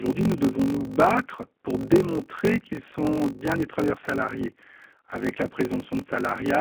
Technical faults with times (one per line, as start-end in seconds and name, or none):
0.00-6.60 G.729 codec
0.00-6.60 block size mismatch (padded)